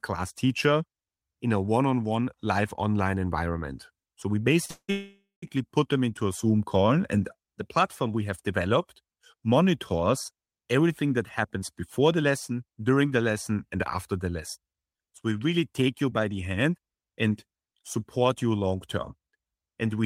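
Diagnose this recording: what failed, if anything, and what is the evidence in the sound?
Short stall from a late packet at 4.65 to 4.71 s, a network and jitter-buffer fault in the call path. The receiver's buffer ran dry when a packet failed to arrive on time, so it stretched the last stretch of speech by about 34 ms until the data came in. Nothing is lost. The sound is held too long, and playback resumes exactly where it stopped, leading straight into the freeze that follows.

Call audio freeze from 4.71 to 4.91 s and again from 4.91 to 5.44 s, before "put them into a". The likely cause is packets held up in the network, leaving the jitter buffer empty for a longer spell. The receiver extended the last sound as it faded, which ends in roughly 60 ms of silence in the first freeze and 150 ms in the second. The audio then picks up where it stopped, with about 0.7 s of gap inserted and no speech missing.

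Jitter buffer slow-down from 6.77 to 7.22 s, a playout adjustment at the receiver. The buffer was rebuilding its reserve, so it repeated single pitch periods and fragments of pauses, adding 67 ms. Speech runs at about 87 percent speed at unchanged pitch. Sounds become drawn out.

Jitter buffer speed-up from 11.03 to 13.11 s, and again from 17.10 to 17.45 s, between "you by the hand" and "support you long term". The buffer held more audio than its target. The receiver trimmed short pitch-period pieces to reduce the delay, roughly 0.2 s in the first stretch and about 40 ms in the second. Speech runs at 108 percent speed at the same pitch and sounds hurried.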